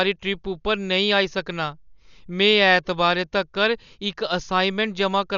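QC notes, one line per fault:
throughout: likely Dolby Digital compression. Speech stops above 6.9 kHz and sounds dull. Starved lines get filled with noise, causing rough flutter. Points to about 48 kbps.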